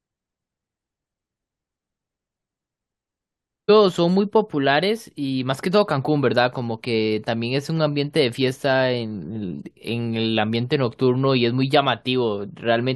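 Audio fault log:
3.68 s, stream segment skipped: the speech jumps abruptly forward at this point with a short blip, and the flow of talk does not pick up where it left off. The likely cause is a chunk of the segmented stream failing to load, with the player moving straight on to the next one. Unlike a packet-loss dropout or muted gap, there is no silence or smeared fill. The audio simply continues from a later point.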